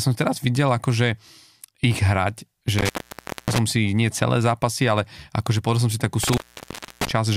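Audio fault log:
2.78–3.58 s and 6.23–7.11 s, intermittent contact: the speech drops out with crackle at each edge, first just before "si nie celé zápasy", then right after "som si takú". A loose plug or cable opens for about 0.59 s and 0.64 s, leaving faint hiss until contact returns.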